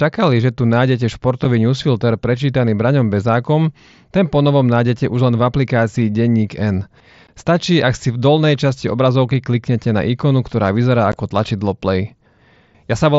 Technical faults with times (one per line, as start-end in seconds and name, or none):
1.44 unconcealed Bluetooth headset packet loss
7.27 unconcealed Bluetooth headset packet loss
11.12 unconcealed Bluetooth headset packet loss